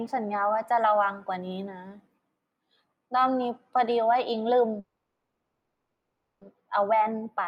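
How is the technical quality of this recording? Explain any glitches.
The recording has two technical faults: a slow drift between its channels throughout, and one stall in the middle of the speech.

Channels drifting apart runs the whole length. The left and right channels appear to run on clocks that differ slightly, around 20 parts per million, so their offset creeps up to a fraction of a millisecond. Heard in mono, this sweeps comb notches slowly, a gentle flanging.

A call audio freeze runs from 4.79 to 6.43 s. The likely cause is delayed packets draining the jitter buffer. The last sound is held as a fading buzz, with about 210 ms of silence. The speech then resumes where it stopped, 1.62 s later, with nothing lost.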